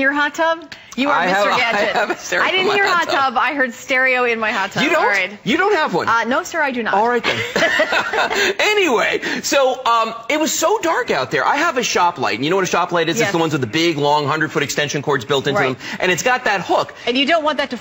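From 16.99 s to the end at 17.81 s, a Bluetooth SBC bit pool drop dulls the treble and adds gritty noise, consistent with the bit pool falling from 31 to about 15.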